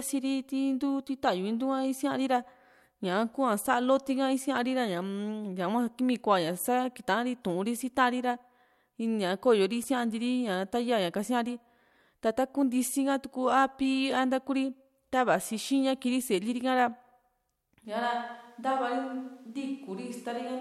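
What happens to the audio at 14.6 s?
Nothing goes wrong at 14.6 s; the audio runs through that moment intact, with no dropout, click, distortion or other fault.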